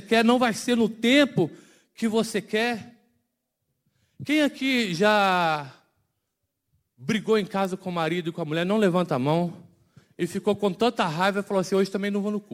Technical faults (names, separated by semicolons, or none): crude rate conversion